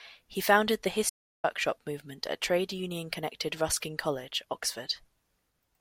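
Speech clip with an audio dropout to silence from 1.10 to 1.44 s, between "founded the" and "movement at trade union": roughly 0.34 s of silence, likely from the input link or device briefly failing.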